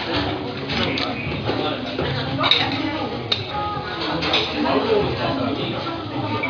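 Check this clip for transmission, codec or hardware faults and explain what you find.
No transmission, codec or hardware faults can be heard anywhere in this audio.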